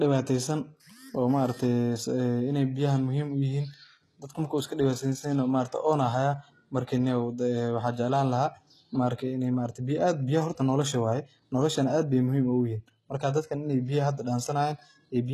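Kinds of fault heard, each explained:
HE-AAC compression: The speech carries plainly audible codec damage, with s sounds gritty and metallic, likely from treble rebuilt by copying lower bands upward, which fits a bitrate near 16 kbps. A spectrogram shows blocky, repeated upper bands and nothing above 12.3 kHz.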